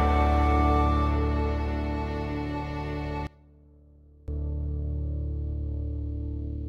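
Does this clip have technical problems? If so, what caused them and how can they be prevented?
Yes. From 3.27 to 4.28 s, one channel inverted likely cancels shared content in the mono sum, dropping the music by about 23 dB to a faint residue. Check channel polarity with a correlation meter before summing to mono.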